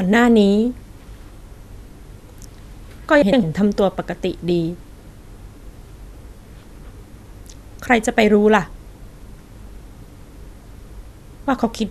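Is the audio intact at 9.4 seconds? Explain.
Yes, at 9.4 seconds the speech plays through without any audible dropout, glitch or other technical fault.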